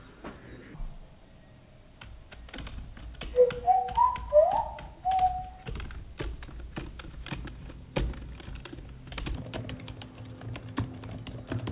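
From 0.74 s to 9.35 s there's a wrong sample rate fault: everything drags at half speed and drops a full octave, 12 semitones down, which fits 16 kHz material played back at 8 kHz without conversion. The sounds come out low, slow and sluggish.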